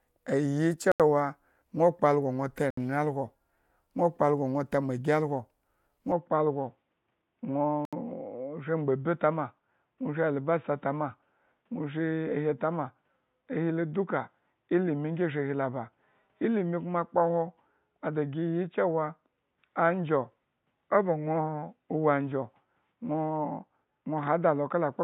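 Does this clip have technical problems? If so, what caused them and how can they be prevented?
Yes. Three short dropouts cut the speech to silence: at 0.92 to 1.00 s (81 ms), 2.70 to 2.77 s (70 ms) and 7.85 to 7.93 s (75 ms). This is likely a Bluetooth stall: radio interference delays packets, the receiving buffer empties, and output pauses until retransmissions arrive. Keeping the Bluetooth link short and unobstructed, away from crowded 2.4 GHz Wi-Fi traffic, prevents these gaps.

From 6.12 s to the end, the speech turns dull and boxy, with nothing above 3.8 kHz. The change happens with no gap, at roughly the same level, and adds a faint background noise far below the speech. The likely cause is the input switching to a poorer device, such as a headset's call-profile microphone, whose narrow band and own noise floor replace the original microphone's. Locking the recording input to the intended microphone in the system settings prevents this.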